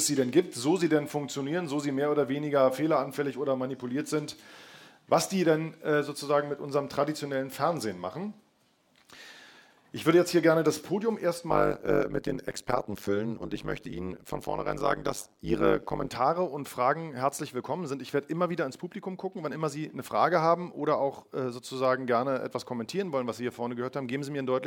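From 11.5 to 16.1 s the sound takes on overlap-add ripple. The audio was split into windowed frames and rejoined, but the overlapping windows do not add up to a steady gain. So the level dips and recovers once per frame, around 100 times a second. The dips are deep, about 60 dB, nearly silencing each trough. The result is a harsh, metallic buzz with extra tones around each note, laid over everything in that stretch.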